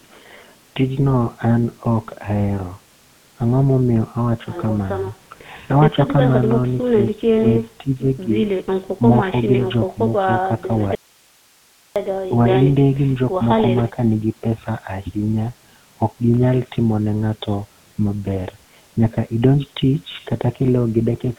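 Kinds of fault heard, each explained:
GSM full-rate codec: The speech has been squeezed through the old GSM full-rate coder, which models the vocal tract and drives it with a thinned-out pulse excitation, consistent with a 13 kbps stream. Throughout, the voice sounds buzzy and gravelly, with nothing left above about 3.8 kHz.
Audio dropout to a faint residue: The signal was likely lost somewhere upstream while the rest of the path stayed live. From 10.95 to 11.96 s the speech cuts out abruptly for about one second, leaving only faint hiss far below the speech, before returning just as suddenly.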